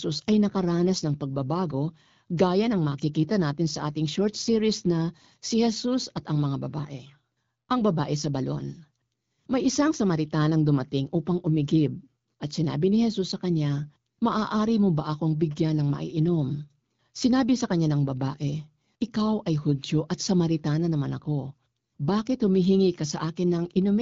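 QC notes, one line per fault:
No faults found; the speech runs through an AMR wideband (HD Voice) codec at 12.65 kbit/s with light coding texture and no content above about 7.5 kHz.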